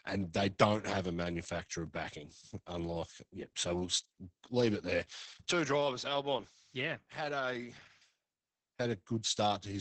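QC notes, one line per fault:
throughout: Opus voice compression. Speech sounds muffled, hoarse and faintly robotic, with nothing above 8.7 kHz, because SILK coding at 10 kbps quantises the excitation coarsely.
5.52–8.02 s: input switched to a poorer device. After "leave it there" speech drops about 10 dB and dulls, cut above 7.6 kHz; likely a microphone change.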